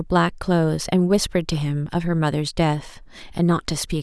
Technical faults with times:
none

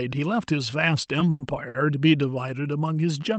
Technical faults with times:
1.30-1.42 call audio freeze
1.68-1.76 short stall from a late packet

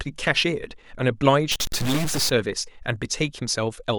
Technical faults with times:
1.52-2.29 stuck bit

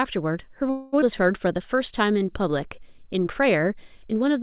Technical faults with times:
0.70-0.94 call audio freeze
1.00-1.04 skip ahead
1.48-3.62 jitter buffer slow-down

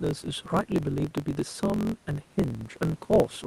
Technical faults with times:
0.00-3.47 block size mismatch (truncated)

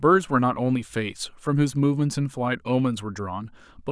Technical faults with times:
none

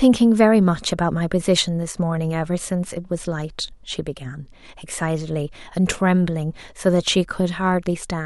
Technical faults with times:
1.92-1.97 one channel drops out

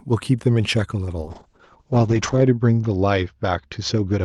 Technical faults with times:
1.23-4.24 call bitrate drop

